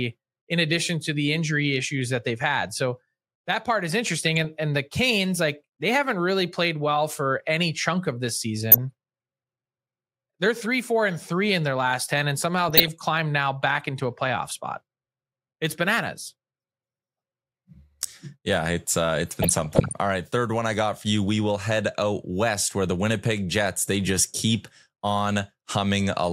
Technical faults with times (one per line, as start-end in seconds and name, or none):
8.72-8.78 DAB burbling
12.69-12.88 DAB burbling
19.42-19.93 DAB burbling